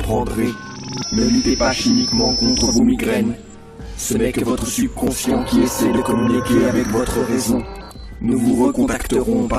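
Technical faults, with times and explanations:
5.07 s, overlap between stream segments: about 16 ms of sound is trimmed where two segments' timestamps overlap, so the waveform jumps and a brief skip is heard.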